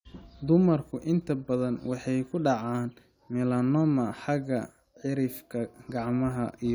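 Nothing technically wrong turns up anywhere in this short stretch of speech, so there's no fault to point to and no time worth flagging.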